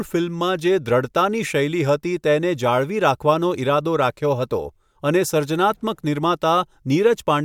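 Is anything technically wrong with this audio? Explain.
No, nothing technically wrong stands out here; the speech comes through without any audible problems.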